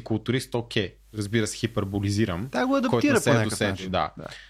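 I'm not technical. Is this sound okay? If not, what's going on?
No. From 0.93 to 3.99 s there is digital radio blending to analogue: the radio lost its digital signal and faded over about 0.29 s to the station's FM broadcast, bringing in a faint hiss, then faded back to digital.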